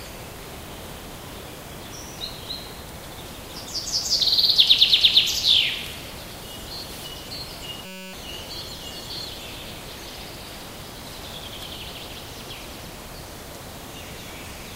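A system hang loop interrupts this recording of sounds from 7.86 to 8.13 s. The computer or driver stalled while the sound hardware kept replaying the same tiny slice of its ring buffer, a 5.33 ms chunk that fits a 256-sample buffer. Repeated about fifty times, that slice fuses into a steady buzz at 188 Hz in place of the real sound, and roughly a third of a second of audio is lost.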